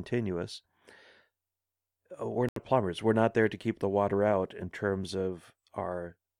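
At 2.49 s the speech cuts out, leaving a hole of silence about 0.1 s long that ends at 2.59 s. When the sound returns it has moved on rather than picking up where it stopped, as if it kept playing underneath. This is a Bluetooth dropout, most likely caused by a short burst of packets that missed their delivery deadline to the headphones. The player outputs nothing until valid data arrives again.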